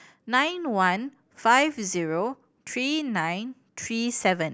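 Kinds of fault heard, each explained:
No faults were found on listening through this speech recording.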